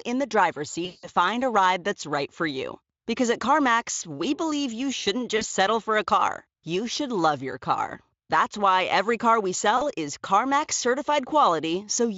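VoIP packet loss concealed by the speech codec hits this speech recording at 0.85 to 1.09 s, 5.37 to 5.44 s and 9.77 to 9.91 s. The decoder is guessing across missing packets by repeating its last pitch and filter at falling gain. The first gap, about 180 ms, smears into a fading buzzy tone or coloured noise. The two 40 ms gaps are brief, each recovering over the following frames of this Speex stream.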